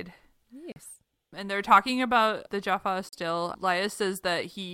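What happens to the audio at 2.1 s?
Nothing goes wrong at 2.1 s: the speech carries on intact through that moment, with no dropout, click, distortion or other fault to be heard.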